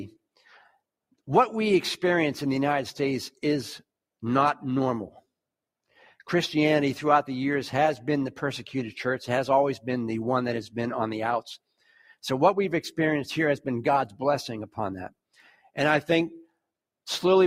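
At 11.78 to 12.16 s and again at 15.34 to 15.77 s, the sound sinks, by about 19 dB and then about 15 dB. This is sound cut by the noise suppressor, which mistook this sound for noise and pulled it down.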